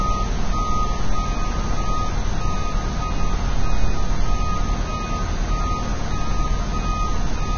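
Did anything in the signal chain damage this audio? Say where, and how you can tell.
Yes, at the codec stage: likely heavy Vorbis compression throughout. Nothing survives above 6.6 kHz, and grainy, hissy treble fits a stream near 18 kbps.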